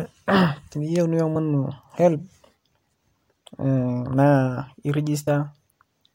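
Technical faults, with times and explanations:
1.35 s and 5.27 s, compressed frames skipped: the speech jumps ahead by about two frames, then one, losing roughly 50 ms and 30 ms. The jump sizes fit a 26.1 ms frame.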